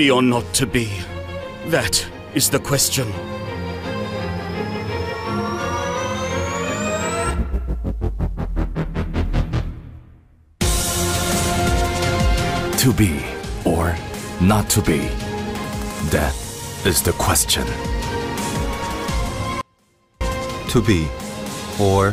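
At 19.61 s the sound drops out abruptly for about 0.59 s, until 20.21 s, leaving only a faint residue roughly 35 dB below normal. This audio dropout to a faint residue likely comes from a brief signal loss while the downstream path stayed live. The waveform collapses to a thin sliver and the spectrogram shows a pale, nearly empty band with hard vertical edges.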